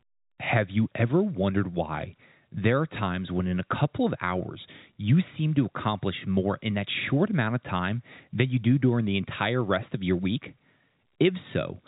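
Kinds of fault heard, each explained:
No faults heard.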